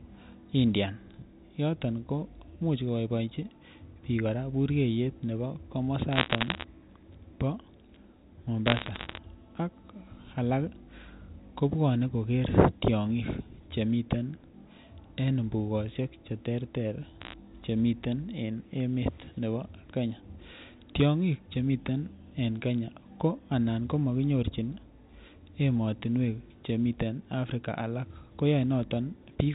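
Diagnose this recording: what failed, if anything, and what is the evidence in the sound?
The digital transmission line corrupted bits in the G.711 stream, so these are bit errors on a digital phone line. Bursts run from 6.13 to 6.64 s, 8.67 to 9.18 s and 17.21 to 17.33 s, at an error rate of around half a percent, about 0.3 percent in the last. Each flipped bit alters a single mu-law sample, and hits on the sign or high-order bits become sharp ticks. Together they form crackle over speech that is otherwise intact and limited to the 4 kHz telephone band.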